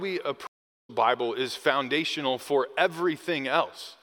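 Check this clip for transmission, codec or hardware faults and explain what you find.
One transmission fault is present: a stream reconnect at 0.47 s. The connection dropped and the audio goes fully silent until 0.90 s, a gap of about 0.42 s. The player then reconnected and started a new decoder partway through the stream, so the sound resumes roughly 0.4 s further on, with that stretch skipped. The waveform shows a flat line across the gap, and the spectrogram a blank vertical band, with the material on either side not joining up.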